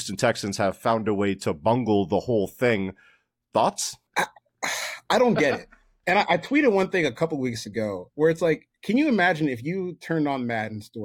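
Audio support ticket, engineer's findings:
Bit error spike at 6.21 s in the speech. Single sharp tick, broadband, unrelated to the surrounding signal, peaking at about -33 dBFS. Two consecutive samples affected. Probable component: memory or digital link upstream of the output. Mechanism: one flipped bit shifts the sample value by a power of two, then it returns immediately.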